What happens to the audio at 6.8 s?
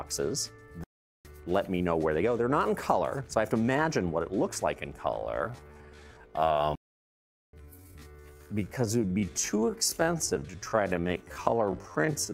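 At 6.8 s the audio is in a playback stall lasting from 6.75 to 7.53 s. The player likely ran out of data or had its thread blocked, so the output falls silent for about 0.78 s.

The same moment also lies within a time-stretched section that runs from 5.06 s to the end. Software likely slowed the audio to about 0.63 times its original speed and held the pitch by repeating short fragments, so the sound is noticeably drawn out.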